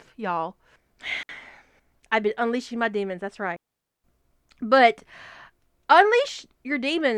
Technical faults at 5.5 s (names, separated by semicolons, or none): none